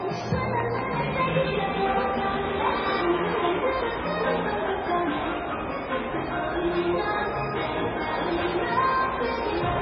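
From start to finish the everyday sound comes through dull and watery. Nothing is heard above about 6.4 kHz, and faint detail swirls in and out while sharp attacks blur. The likely cause is heavy MP3 compression at a very low bitrate, which fits something around 16 kbps. Starved of bits, the encoder drops the treble at a fixed cutoff and zeroes quieter frequency lines, which then flicker on and off between frames.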